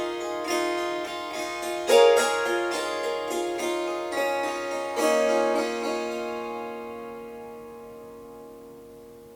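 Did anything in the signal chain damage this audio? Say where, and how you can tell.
No, nothing in the signal chain audibly damaged this recording of everyday sounds. At no point does the audio show damage from any stage between capture and playback.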